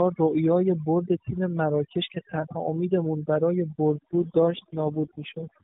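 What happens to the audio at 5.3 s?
At 5.3 s the mobile link is in an AMR rate drop that began at about 3.89 s and runs to the end of the clip. The network has pushed the AMR narrowband codec into a lower mode, which fits a step down from 12.2 to 4.75 kbps, leaving far fewer bits to describe each frame. The band and timing stay unchanged, with no gap, but the voice turns rougher, buzzier and more synthetic than in the cleaner-sounding stretch before 3.89 s.

Overdone noise removal is also at work here, as it is across the whole clip. The noise reducer is set so aggressively that it drives individual frequency bands down or out whenever they sit close to its noise estimate, and the quieter parts of the voice are cut along with the noise. The result is a lowered background broken up into twinkling specks.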